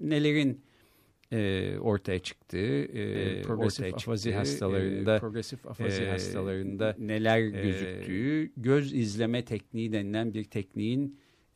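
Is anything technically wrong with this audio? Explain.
Yes. From 3.16 s to 8.28 s there is a doubled audio track: the speech was likely captured a second time through a slower path, so a copy about 5 dB quieter trails roughly two seconds behind, full-band and dry, switching on and off abruptly.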